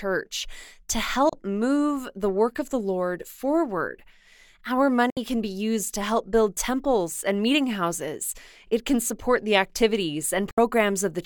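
At 1.29 to 1.33 s, just before "move the work of", then at 5.10 to 5.17 s and 10.51 to 10.58 s, the speech mutes in brief digital broadcast dropouts. Each fades out within 3 ms, fitting one or two lost frames, and resumes later without concealment filling the gap.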